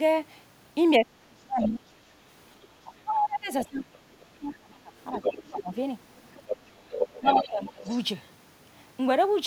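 Right from 0.98 to 1.83 s you get speech suppressed in double talk. The talker dips hard, something like 35 dB at the deepest, for most of that stretch. It's likely the echo canceller hearing both sides at once and clamping everything. Inside that, from 1.61 to 1.78 s, the other side's voice is leaking through, about 10 dB under the speech.

The same thing returns at 2.83 to 5.77 s. Around two seconds of the talker get pushed down, roughly 25 dB at worst. Near the end of that, at 5.01 to 5.30 s, the far voice leaks in again, only about 5 dB below the talker. It comes back from 6.16 to 6.57 s at around 10 dB down, then from 6.89 to 7.49 s at about 5 dB down.

Overlapping that last leak, from 7.19 to 7.87 s, roughly half a second of the talker is ducked by about 25 dB. The residue the canceller likely failed to remove hangs on faintly from 7.84 to 8.28 s, around 25 dB below the speech, a quiet tail.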